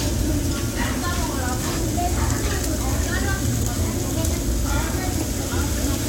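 No technical faults can be heard anywhere in the audio; the signal stays intact and steady throughout.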